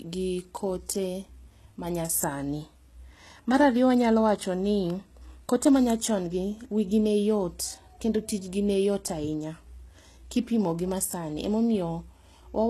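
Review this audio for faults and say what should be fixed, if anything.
Throughout the speech, the treble sounds synthetic rather than recorded. Sibilants come across gritty and lispy, the upper band has a metallic sheen that does not follow the harmonics below it, and nothing remains above 12.3 kHz. This is likely HE-AAC compression at a very low bitrate, around 16 kbps. Only the lower spectrum is properly coded, and spectral band replication rebuilds the treble by copying lower bands upward under a coarse envelope. To prevent it, encode the speech with standard AAC or Opus at a higher bitrate, or keep an uncompressed master.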